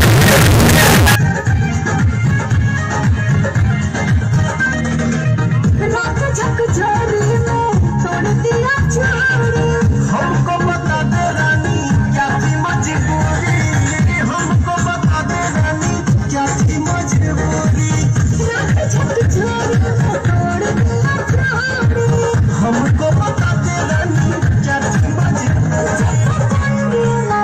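From the very start to about 1.16 s, the audio turns into a harsh, extremely loud, nearly square waveform sitting at an almost fixed, high level. This is the sound of float read as integer, likely from 32-bit float samples being interpreted as 32-bit integers, so sign and exponent bits dictate the level. Unlike ordinary clipping, the plateau sits at an almost fixed, high level however quiet the original, and quiet passages become just as loud as busy ones.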